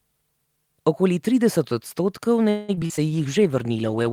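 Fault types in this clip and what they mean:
Repeated packet loss (robotic sound): from 2.49 to 2.99 s the speech turns choppy and robotic, with four gaps patched by stretching prior sound, the longest 192 ms.
Call bitrate drop: from 3.09 s to the end the speech grows rough and muffled as the encoder falls from 40 to 16 kbps, coding coarsely.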